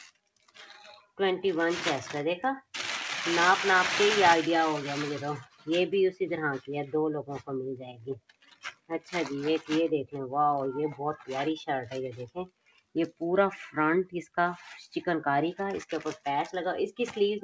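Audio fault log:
throughout: noise suppressor applied to music or sounds. A speech-tuned suppressor treats steady sound as noise. Level pumps and swings by around 10 dB, thinning held parts.
0.11–0.57 s, 5.43–5.67 s, 7.92–9.13 s, 12.27–12.95 s: sound cut by the noise suppressor. Steady or decaying passages sink by about 16, 15, 18 and 18 dB.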